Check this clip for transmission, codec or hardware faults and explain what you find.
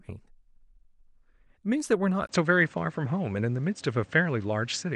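One fault is present: at 2.27 s the speech briefly drops out for 20 ms and then continues through a duller, narrower channel until the end, the sound of an input switched to a poorer device, most likely a change to another microphone or a headset profile. Nothing above 8.7 kHz survives, and new background noise appears roughly 30 dB under the speech while loudness stays much the same. A spectrogram shows a thin vertical gap, then a hard ceiling at 8.7 kHz and a raised noise floor; the waveform's envelope barely changes.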